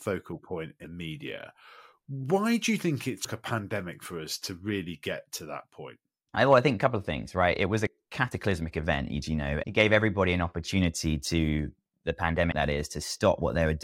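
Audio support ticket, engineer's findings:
Compressed frames skipped at 0.84, 3.24, 7.87 and 12.52 s in the speech. Audio jumps ahead about 150, 100, 70 and 70 ms, fitting whole 26.1 ms frames missing or rejected by the decoder. On the spectrogram, the content shifts abruptly with no silent gap.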